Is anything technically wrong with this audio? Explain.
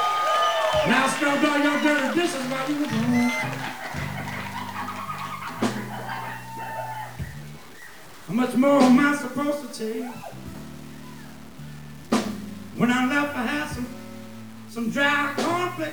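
Yes. Throughout the clip, a grainy, gritty distortion rides on the sound and shifts as it changes, with quiet passages sputtering or dropping out, the error sitting roughly 25 dB below the signal. The likely cause is low bit depth without dither, consistent with truncation to about 7 bits.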